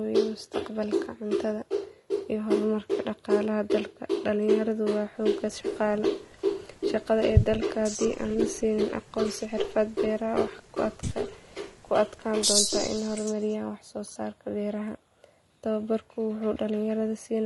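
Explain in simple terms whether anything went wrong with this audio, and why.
Low-delay AAC compression affects the whole recording. The voice sounds rough and grainy throughout, with a hiss-like fuzz between its tones and a top end that sounds dull or artificial. The likely cause is the low-delay audio coding used in video calls. It cuts sound into very short slices so conversation stays snappy, but short slices capture the voice's tones poorly, and at the modest data rate used here that damage is plainly audible.

AAC frame loss with concealment occurs at 1.38 to 1.40 s and again at 14.13 to 14.17 s. Each time, one small packet of sound, about 20 ms, never arrived. The receiving end patched the gap by guessing from the sound just before it. The patch is brief, so it comes across as a tiny smeared, noisy or slightly hollow blip rather than a dropout.

Echo leak appears at 12.68 to 13.10 s and 13.35 to 13.54 s. 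A delayed copy of the voice trails the original by about 215 ms. It is faint but noticeable the first time and barely there the second. One caller was probably using a loudspeaker, and that side's echo canceller failed to fully remove what its microphone picked up, so the leftover was sent back into the call.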